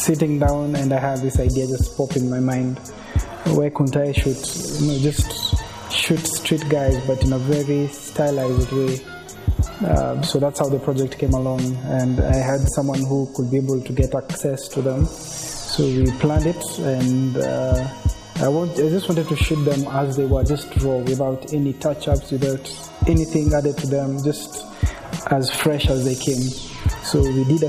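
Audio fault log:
No faults detected.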